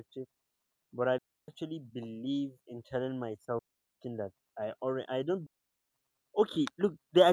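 A digital wireless link repeatedly loses too much data, so the receiver mutes with a very short fade: digital wireless dropouts at 1.18 s after "but I" (about 0.30 s), 3.59 s after "in telling" (0.39 s), and 5.47 s after "I already I don't" (0.46 s), each a clean hole of near silence without noise bursts.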